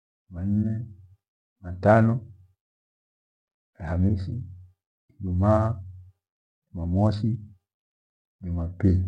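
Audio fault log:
Nothing faulty is heard anywhere in this speech recording.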